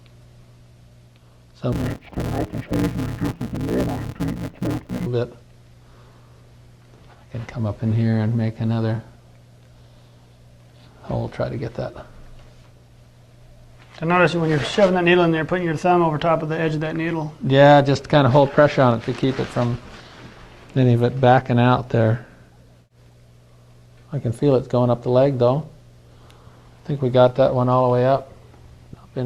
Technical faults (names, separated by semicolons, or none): interleaved audio read as planar